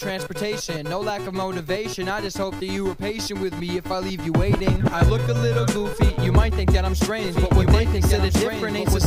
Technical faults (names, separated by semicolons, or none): doubled audio track